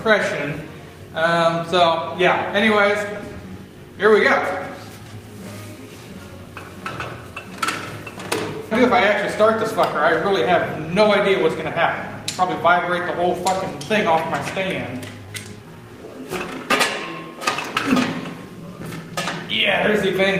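At 8.71 to 8.73 s there is a skip ahead. About a second of audio never plays, and the material on either side is butted together with no fill. Playback lurches forward, a clean discontinuity rather than a silence. On a waveform the envelope changes abruptly at that point with no gap. A spectrogram shows one column where the spectral content switches suddenly from one state to an unrelated one.

Right after the jump, jitter buffer speed-up follows in four stretches. From 8.82 to 11.09 s it runs at 103 %, from 11.78 to 13.43 s at 107 %, from 14.14 to 16.23 s at 113 %, and from 17.31 to 19.10 s at 102 %. The receiver is draining excess buffered delay by cutting out pitch-period-sized slivers, a few tenths of a second in total. The sound runs faster at unchanged pitch, most audibly hurried in the 113 % stretch. The spectrogram shows harmonics at unchanged frequency but events packed closer together in time. 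The waveform shows tiny periodic seams where cycles were removed.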